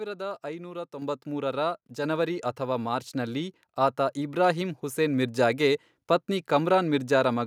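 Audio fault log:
1.02 s, microphone volume stepped up: the capture software judged the input too quiet and raised the microphone's level in a single jump of about 6 dB, so the speech and the background noise behind it suddenly become louder together at the same instant.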